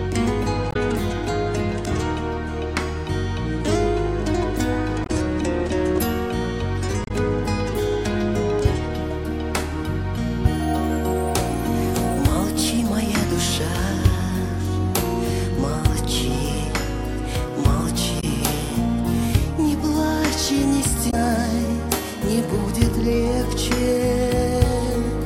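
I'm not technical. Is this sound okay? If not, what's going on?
No. Five times the sound breaks into a brief chirp, squawk, click or short gap: at about 0.69 s, 5.03 s, 7.04 s, 18.2 s and 21.07 s, each lasting well under a tenth of a second. This is damaged data in a compressed stream. A few pieces of the file were spoiled, so the player couldn't read them properly. It lost its place for a moment and jumped forward to the next readable chunk.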